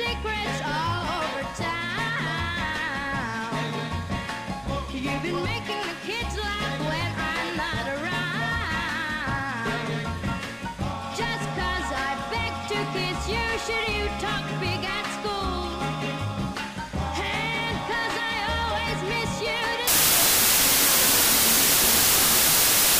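From 19.88 s to the end, loud harsh noise swamps the sound, which plays 1.5 times fast: a wrong sample width, consistent with 16-bit data read as packed 24-bit samples.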